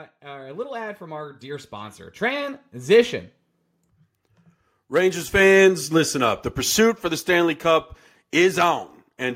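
Automatic gain rising affects this speech clip from 0.21 to 3.18 s: the gain control judged the input too quiet and raised its gain by about 11 dB. The speech and the background noise beneath it swell upward together over those three seconds. Automatic gain falling follows from 5.34 to 8.88 s, where the control judged the level too loud and pulled its gain down by about 5 dB. The speech starts loud and then sinks steadily, taking its background down with it.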